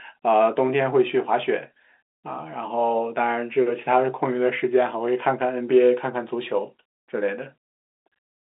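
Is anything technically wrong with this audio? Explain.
No, nothing here is actually wrong: the speech comes over a G.711 telephone line, so the sound sits in the usual band of roughly 250 Hz to 3.7 kHz with nothing above about 3.8 kHz, which is just how that kind of phone line is supposed to sound.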